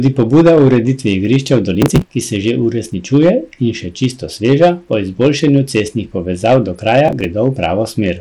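Throughout the speech, hard clipping from about 9 dB of overdrive flattens the loudest peaks, a small share of samples, adding harsh crackle on the peaks. The whole clip also has dull, flickering treble with gritty noise, likely Bluetooth SBC compression at a low bitrate around 96 kbps. From 1.75 to 2.10 s, between "igrišča v" and "ki se že uresničuje", processor overload crackle tears the sound as roughly 10 ms buffers are repeatedly skipped. A second, shorter burst of the same crackle follows "izboljšanju cestnih povezav do", from 7.08 to 7.25 s.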